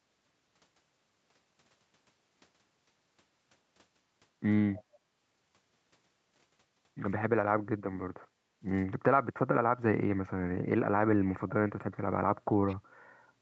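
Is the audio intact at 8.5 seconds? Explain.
Yes, the speech at 8.5 seconds is intact, with nothing there beyond the normal sound of a call path whose content stops at about 8 kHz.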